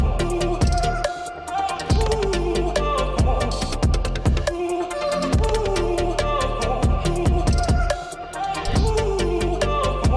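Nothing goes wrong anywhere in the clip, with no glitches, dropouts or other technical faults to point to at any moment.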